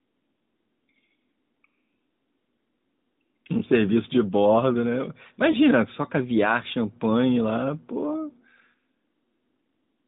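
At 5.52 to 5.57 s there is a lost AMR speech frame. A single 20 ms frame failed its error check, and the decoder covered the hole by repeating the previous frame's pitch and vocal-tract settings at reduced gain. It sounds like a short dip or warble, not a hard gap, and the speech returns within tens of milliseconds. That separates it from a packet dropout, which goes to silence or clicks. The narrowband mobile coding around it cuts everything above 4 kHz.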